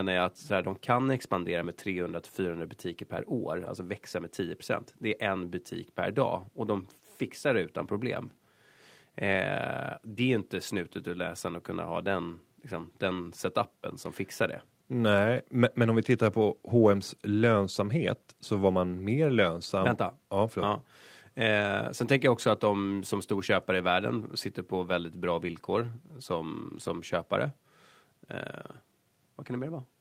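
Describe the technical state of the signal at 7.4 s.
At 7.4 s the signal is intact, with no audible fault at that point in the speech.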